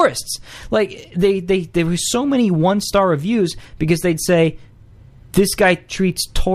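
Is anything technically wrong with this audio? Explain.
Yes, the speech has hard clipping in three places: from 0.00 to 0.05 s, at 4.33 s, and from 5.39 to 5.71 s. Each time the level runs about 1 to 2 dB past what a stage in the chain can pass, so the peaks are sheared off flat. Those flat tops add high harmonics, heard as brief crackle on the loudest moments. On a waveform the peaks sit squared off, and a spectrogram shows vertical smears reaching up into the high kHz range at those instants.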